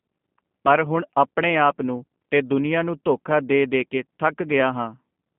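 Throughout, the speech sounds narrow, rough and synthetic, nothing above 3.4 kHz, which fits G.729 codec coding at 8 kbit/s rebuilding each frame from a filter and sparse pulses.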